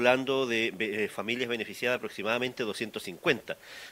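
No technical faults are audible.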